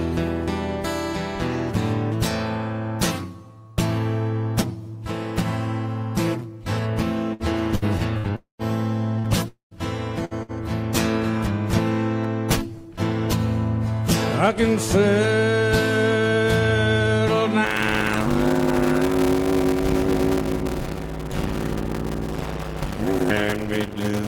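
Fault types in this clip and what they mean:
burst of packet loss: Short runs of lost audio, each about 60 ms, at 7.33, 7.75, 8.18, 9.19, 10.25 and 10.43 s. At each one the receiver stretches the last sound into a brief held buzz or hiss lasting about 50 to 60 ms and turns it down. Playback then picks up a little further on, so a small slice of the sound between the two sides of each gap is simply missing.
long network dropout: Two longer breaks, starting at 8.36 and 9.48 s and lasting about 0.26 s each, most likely caused by the network delivering no audio for that stretch. About 240 ms of sound is lost each time. The receiver first extends the last sound as a decaying buzz or hiss, then falls to about 130 ms of silence. The audio resumes past the lost section, leaving an audible hole in the flow.
block size mismatch (padded): From 17.64 s to the end, one stage hands on shorter blocks than the next stage reads, and the remainder of each block is zero-filled. 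Each block carries a small silent gap, which is heard as a steady 100 Hz buzz running through the sound. Because of the padding, playback runs at 0.533 times normal speed with timbre unchanged. This fits 256-sample blocks padded out to 480 samples.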